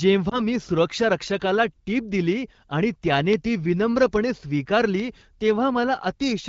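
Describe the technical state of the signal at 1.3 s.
Right at 1.28 s there's a bit error spike, a single sample just before "टीप दिली आणि त्याने". One flipped bit knocks that sample's value off by a power of two before it snaps back, so you get one sharp broadband tick that has nothing to do with the speech.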